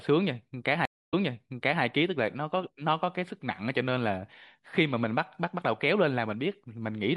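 A stream reconnect runs from 0.85 s to 1.83 s in this speech clip. The connection dropped, the player fell silent for about 0.26 s, then reconnected and started a new decoder partway through the stream. Because the server resent a burst of earlier data, the speech resumes 0.72 s before the point where it broke off, so the listener hears a short gap followed by a stretch of speech that repeats what was just heard.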